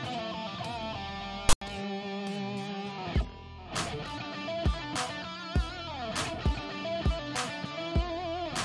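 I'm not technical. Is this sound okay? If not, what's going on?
No, there's one glitch. From 1.49 to 1.61 s, just an eighth of a second, you get a harsh burst of static with abrupt edges. That's file tags played as audio: the player read the file's label information, the bit holding text like titles, as if it were sound. The text part comes out as a loud, lopsided rasp, and the empty filler after it plays as a brief silence.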